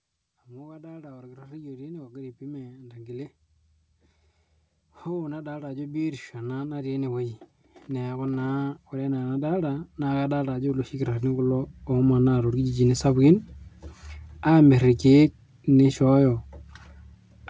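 From 0.46 to 3.32 s the level climbs by about 8 dB, then again from 5.04 to 12.88 s by about 18 dB: automatic gain rising, where the gain control judges the input too quiet and turns itself up. Speech and room noise swell together, so the noise floor lifts too. On a waveform the envelope widens steadily across each span; on a spectrogram the whole band brightens, still capped at 8 kHz by the call path.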